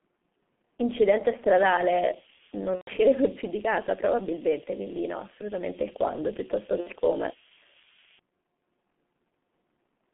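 From start to finish the speech carries the sound of the G.723.1 codec. The band is held to roughly 150 Hz to 3.4 kHz, and the coarse coding, consistent with a rate near 6.3 kbit/s, leaves voices muffled and hoarse with smeared consonants. Unlike plain telephone band-limiting, the slow 30 ms frame updates add a grainy roughness on top of the dullness.

From 1.98 s to 8.19 s, low bit depth with noise shaping is layered over this. The quantisation sounds like about 4 bits, and its rounding error has been pushed upward into a thin, steady hiss about 5 dB louder than the speech itself. Ordinary coarse quantisation gives a gritty distortion that follows the signal. This hiss instead tilts sharply toward the top of the band and stays constant whether or not speech is present.

VoIP packet loss concealed by the speech codec cuts in twice within that stretch. The first is from 2.76 s to 2.90 s, a 120 ms gap consistent with four lost frames. 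The second is from 6.80 s to 6.90 s, lasting 60 ms. At each gap the decoder repeats its last pitch and filter, so the audio smears into a fading buzzy tone or coloured noise. It takes a short while to recover once packets resume. That differs from a plain dropout, which would fall silent or click instead.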